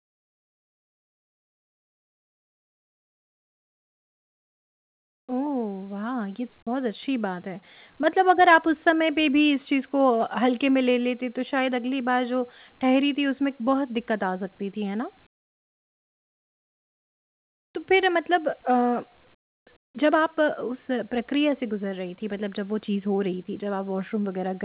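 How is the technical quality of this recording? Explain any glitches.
The speech comes through a narrowband call path with nothing above 4 kHz, and in four pauses the real background is replaced by comfort noise, at 0 to 5.29 s, 15.27 to 17.75 s, 19.35 to 19.67 s and 19.77 to 19.95 s. The noise likely comes from discontinuous transmission: the sender goes quiet when no speech is detected, and the receiver fills the pause with a smooth synthetic hiss about 19 to 27 dB below the real background. On a waveform the floor drops flat, and a spectrogram shows uniform, textureless noise.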